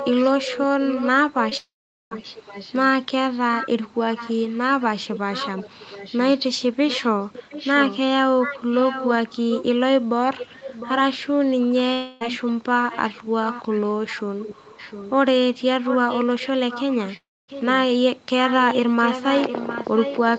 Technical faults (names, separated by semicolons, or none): echo leak; short concealed packet loss; long network dropout